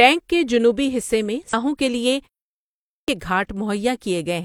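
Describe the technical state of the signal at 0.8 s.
At 0.8 s the signal is intact, with no fault to hear at that moment.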